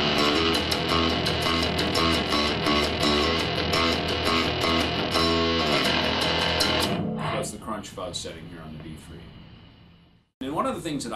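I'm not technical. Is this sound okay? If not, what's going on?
No. A scratch on the CD ruined a bit of data each time the disc turned, causing CD scratch ticks: four quick ticks between 1.61 and 2.39 seconds.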